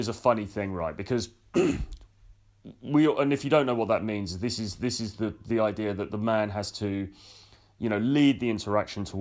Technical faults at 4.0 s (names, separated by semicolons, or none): none